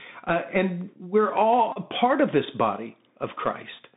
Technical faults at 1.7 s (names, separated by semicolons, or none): Bluetooth CVSD headset codec; Bluetooth headset packet repeated